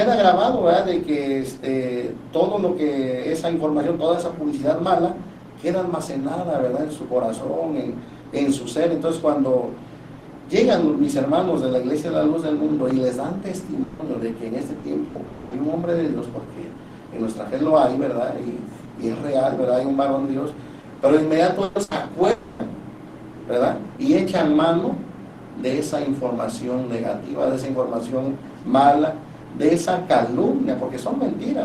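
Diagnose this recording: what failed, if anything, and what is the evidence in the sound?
Long network dropout at 13.83–14.02 s, 15.27–15.54 s and 22.31–22.62 s: a network-stage fault. The sound is continued as a fading buzz or hiss for 160, 240 and 280 ms, never falling to silence, then resumes later with that much missing. A stalled stream is the likely cause.

Short concealed packet loss at 14.79–14.86 s: also network. About 40 ms never reached the decoder in time, so the receiver extended the preceding sound, pitched or as shaped noise, and blended back. It is heard as a brief smear or wobble.

Burst of packet loss at 15.07–15.18 s, 21.63–21.78 s and 21.83–21.94 s: network again. Gaps of 80, 120 and 80 ms were filled by carrying the last sound forward while turning it down, giving a held buzz or fading hiss, before the audio picks up further on.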